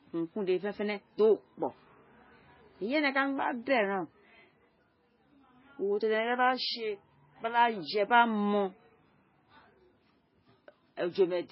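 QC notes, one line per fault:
Throughout: MP3 compression. The speech has nothing above 5.6 kHz and carries heavy coding damage: a watery, swirling texture as weak frequency lines drop in and out from frame to frame, s sounds turned metallic, and consonant onsets smeared. A plain low-pass filter would dull the top without that warbling, so this is likely an MP3 encoder starved of bits, which fits a bitrate around 16 kbps.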